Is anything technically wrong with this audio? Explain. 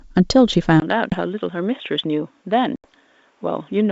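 Yes. From 0.8 s to the end of the speech, the sound turns dull and boxy, with nothing above 3.8 kHz. It comes in about 10 dB quieter, with a new background noise roughly 40 dB below the speech, after a 20 ms silence at the changeover. The likely cause is an input switched to a poorer device: the recording moved mid-stream to a narrower-band microphone or headset profile with its own level and noise floor, which discards the upper range that the G.722 wideband coding in use would otherwise carry.

There are two hard-edged dropouts, at 1.10 s (20 ms missing, with the disturbance lasting to about 1.20 s) and at 2.76 s (80 ms missing, settling by about 2.85 s). After each gap the speech resumes slightly distorted. This is packet loss on an ADPCM call. The missing stretches were filled with silence, and the receiving decoder's adaptive predictor and step size lost track of the sender's. It takes some tens of milliseconds to recover. 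The longer gap fits about four consecutive packets going missing.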